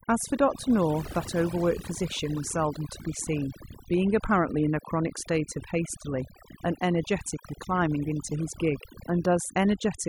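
Overdone noise removal runs throughout: bands near the noise estimate are cut hard, leaving a lowered background that breaks up into twinkling specks.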